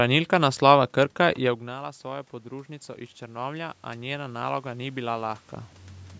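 From 1.64 s to 5.49 s the voice and the room noise behind it swell together, slowly climbing in level rather than jumping. This is automatic gain rising. Just before, around 1.5 s, the talker moved away and the input fell by about 16 dB. The automatic gain control heard a quieter signal and raised its gain by about 9 dB across nearly four seconds, lifting the background with the voice, until the talker moved again near 5.5 s.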